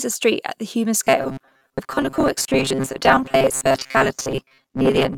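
From 1.04 s to the end of the clip, the speech turns into a rigid, metallic buzz fixed at 134 Hz while still loosely tracking the phrasing: robotic sound from repeated short buffers. The likely cause is audio arriving too seldom, with the playback filling each gap by repeating the last chunk of roughly 7.5 ms, which fits that pitch. About half of what is heard is repeated material, so the corresponding real audio is skipped.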